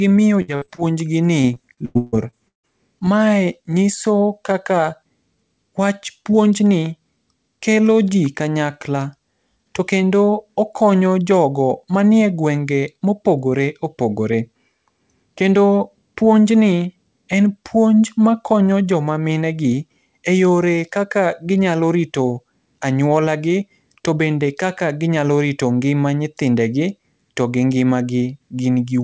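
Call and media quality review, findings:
Repeated packet loss, 0.42–0.80 s and 1.42–3.02 s: bursts of dropped or late packets, with the jitter buffer filling each hole by extending the last sound. Four short gaps, then eight, longest about 155 ms. Speech turns choppy, with pieces missing. Top end stops at 8 kHz across the clip, consistent with a G.722 call path.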